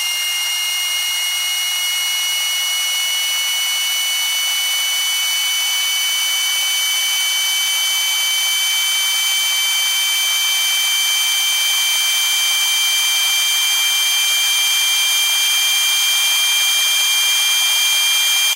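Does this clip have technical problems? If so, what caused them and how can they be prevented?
No, this clip has no technical problems, so there is nothing to prevent.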